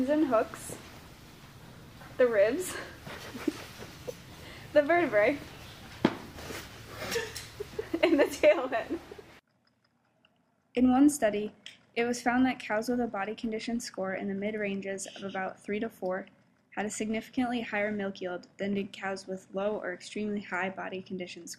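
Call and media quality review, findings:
Nothing to flag here, no faults turned up anywhere in this clip.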